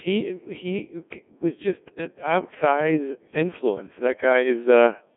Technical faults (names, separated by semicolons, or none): Codec 2 vocoder